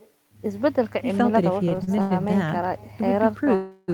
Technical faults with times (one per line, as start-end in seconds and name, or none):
0.00-3.93 echo with no canceller
1.69-2.12 repeated stalls (stutter)
3.55-3.90 call audio freeze